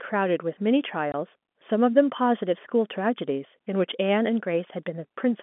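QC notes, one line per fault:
1.12–1.14 s, packet loss filled with silence: a 20 ms hole drops the speech to silence, consistent with one lost 20 ms packet replaced by silence. The edges of the hole are abrupt. The waveform shows a flat gap, and the spectrogram shows a blank vertical slot inside the telephone-band speech.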